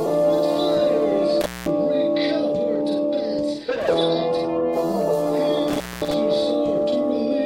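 At 1.41 s and again at 5.68 s the audio drops out through intermittent contact, a loose connection briefly opening for about 205 ms and 218 ms. Crackle marks each break's edges, with faint hiss between. The waveform shows near-flat gaps; the spectrogram shows vertical clicks framing low, faint noise.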